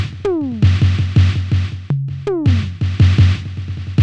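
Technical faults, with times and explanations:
Throughout, wrong sample rate: the music plays back slower than it was captured, at about 0.69 times normal speed. Pitch falls with it, by roughly 6.5 semitones, so everything sounds low and dragging. This fits 32 kHz material played at 22 kHz without conversion.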